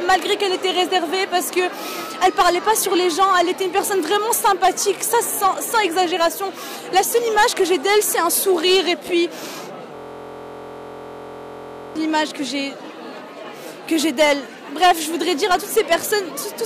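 From 9.96 s to 11.96 s a system hang loop takes over. The system stalled while the audio hardware kept replaying one 23.22 ms slice of its ring buffer, which fits a 1024-sample buffer. Because the slice is so short, it repeats at 43.1 Hz and is heard as a steady, flat buzz rather than a stutter. On a waveform the block repeats identically dozens of times. A spectrogram shows evenly spaced horizontal lines at multiples of 43.1 Hz for those two seconds.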